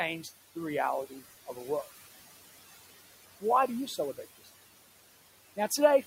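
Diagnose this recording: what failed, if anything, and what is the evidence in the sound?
The call-processing stage shows noise suppressor artifacts across the whole recording. The room noise sits about 17 dB below the speech, and the suppressor pulls it down by about 15 dB in the gaps between phrases, then lets it swell back under each phrase, so the background pumps with the speech. On a spectrogram the noise floor shows as a dark band between phrases and fills back in under them.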